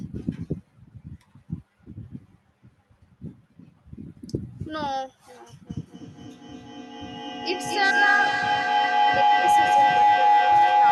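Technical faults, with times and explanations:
5.67 s to the end: feedback howl. Each trip around the microphone-loudspeaker loop adds gain, so a tone near 700 Hz, with repeats about every 200 ms, climbs to about 8 dB above speech. Echo fades; this grows.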